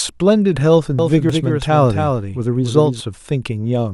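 From 0.99 s to 3.00 s the speech is heard twice: a second, full-band copy trails roughly 300 ms behind, a few decibels quieter, with no room tail, and it cuts in and out abruptly. This doubled audio track is likely a second capture through a slower path, mixed back in.

At 1.30 s a brief glitch breaks through. This is damaged data in a compressed stream: corrupted bytes left the decoder unable to read those frames, so it lost sync and resumed at the next valid header.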